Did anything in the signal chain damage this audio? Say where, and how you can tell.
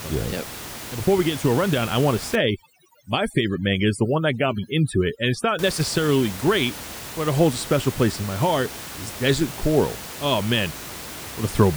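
Yes. From 2.35 to 5.59 s, after "rundown I want to", the background drops to twinkling near-silence. This is overdone noise removal in call processing, cutting bands near its noise estimate.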